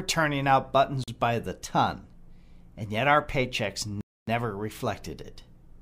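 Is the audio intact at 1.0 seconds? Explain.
No. Just after "turning out", from 1.04 to 1.08 s, the sound drops to silence for about 41 ms and then resumes with "by the ton". That pattern is most likely a Bluetooth stall: radio interference delayed packets, the headphones' buffer emptied, and playback waited for the resent data. What sets it apart from packet-loss concealment is the gap itself. There is a clean pause of true silence, not a smeared or repeated fragment filling the hole.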